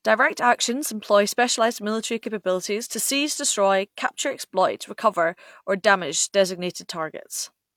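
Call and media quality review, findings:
No technical faults found in the speech signal: level, continuity and timing hold steady throughout, with nothing pointing to a capture, transport or playback problem.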